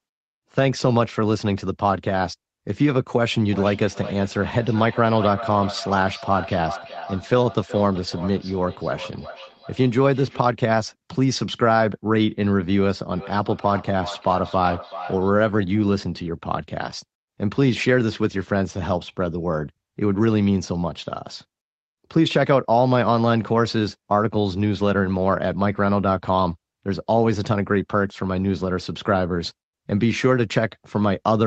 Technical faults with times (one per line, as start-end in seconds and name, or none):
3.49-10.51 feedback echo between two devices
13.16-15.37 feedback echo between two devices